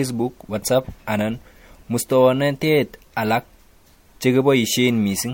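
Throughout, the speech is swirly and hollow with blurred attacks, beyond one MP3 pass near 64 kbit/s, likely generation loss from several re-encodes.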